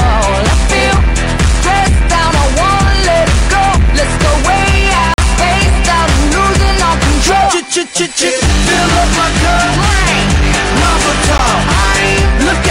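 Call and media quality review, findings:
Bluetooth dropout, 5.14 to 5.18 s (about 44 ms) and 11.38 s (about 15 ms). Abrupt silent holes; audio resumes further along, as if it had played on. Likely late or dropped packets on the headphone link, consistent with three packets then one.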